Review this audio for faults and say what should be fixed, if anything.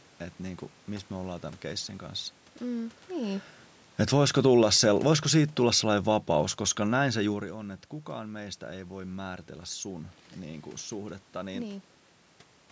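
Automatic gain falling from 4.05 to 7.43 s, ending just before "on että kukaan meistä": the gain control judged the input too loud, or its background noise too strong, and lowered its gain by about 6 dB over those three seconds, so the speech and the room noise behind it sink together. Setting the microphone level lower, so the control never sees an overloaded input, would prevent it.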